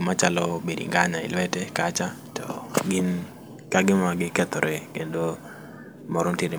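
Nothing goes wrong anywhere in this speech recording; there's no technical fault to point to at any moment.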